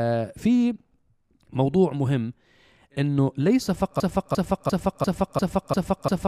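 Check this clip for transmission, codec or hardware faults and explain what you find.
One fault is present, a broken-record loop running from 4.00 s to the end of the clip. The playback or streaming chain likely stalled and kept resending the last fragment it had buffered instead of fresh audio. From 4.00 s, a slice of speech about 0.35 s long plays seven times in a row, identical each pass and butted together, so the sound stutters mechanically until the clip ends. Whatever speech should have followed is lost.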